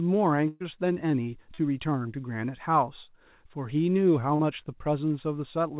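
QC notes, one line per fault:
0.48–0.62 s, burst of packet loss: about 120 ms went missing and the decoder extended the last sound, turning it down as the gap went on; spectrogram shows a smeared, decaying stretch before a jump.
1.54–1.60 s and 4.36–4.41 s, short concealed packet loss: about 40 ms lost each time, patched from preceding sound, heard as a brief smear.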